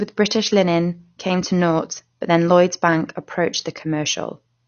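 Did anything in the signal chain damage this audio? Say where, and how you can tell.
Yes. Throughout the speech the sound is dull and smeared, with nothing above 6.6 kHz and a fizzy warble on sibilants. The codec stage is the likely culprit: AAC compression at a rate fitting 32 kbps, where AAC-LC drops the top band and quantises the rest too coarsely.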